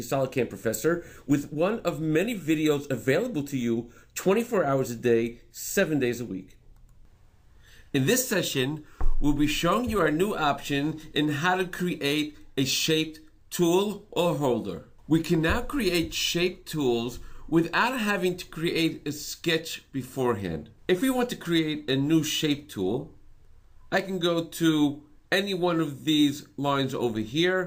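Nothing is technically wrong with this audio.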